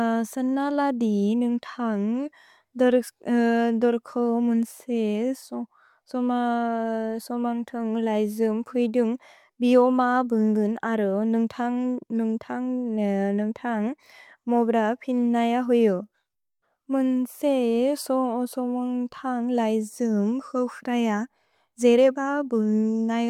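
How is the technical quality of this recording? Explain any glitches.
No glitches or technical faults can be heard here.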